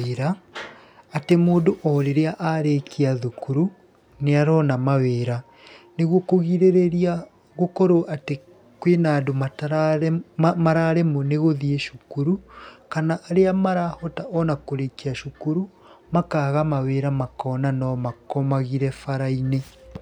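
No technical faults can be heard anywhere in this speech recording. Nothing at any point interrupts or disturbs the audio.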